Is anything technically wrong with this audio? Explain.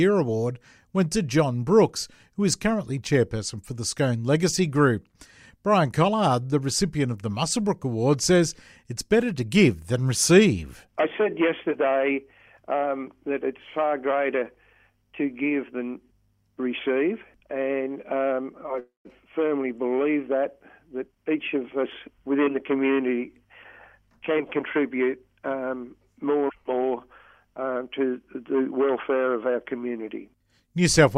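Yes, there are two faults. From 18.79 to 19.07 s there is a call audio freeze: the last sound stretches into a fading buzz and drops to silence for about 160 ms before the audio resumes where it left off. The likely cause is packets held up in transit, which emptied the jitter buffer so the receiver had to fill 256 ms on its own. Unlike a packet-loss dropout, nothing is skipped. The gap is inserted, and everything afterwards plays later.

From 20.93 to 22.86 s comes a jitter buffer speed-up. After the delayed packets arrive, the buffer holds more than its target, so the receiver trims many short pitch-period slices in succession, about 0.3 s in all. The audio runs at roughly 113% speed and sounds hurried, but its pitch stays put. That steady pitch separates it from a sample-rate or playback-speed error, where pitch would rise along with the tempo.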